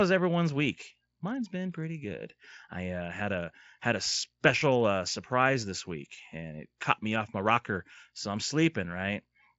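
No faults are present in this speech, which comes through a working Speex path with nothing above about 7.7 kHz.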